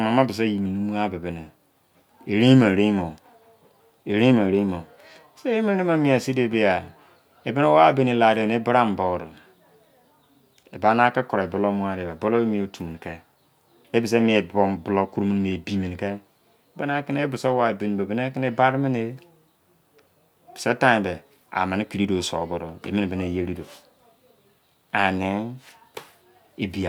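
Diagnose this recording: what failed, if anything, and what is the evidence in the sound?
Nothing in the signal chain has failed: the speech reaches the listener continuous and intact, with every stage from capture to playback doing its job.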